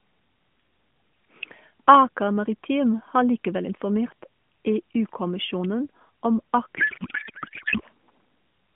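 From 6.78 to 7.81 s there is a codec payload misread. The sender packed each AMR frame in octet-aligned form, padding fields out to byte boundaries, while the receiver read it as the tightly packed bandwidth-efficient layout. Every field therefore lands a few bits off, and the decoder builds speech from the wrong parameters. For about a second the speech gives way to garbled noise and warble that barely tracks it. The narrowband mobile-codec character around it, limited to roughly 150 Hz to 3.4 kHz and consistent with the 12.2 kbps AMR mode, returns once the frames decode correctly.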